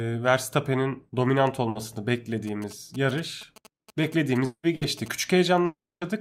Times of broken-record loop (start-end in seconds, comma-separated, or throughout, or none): none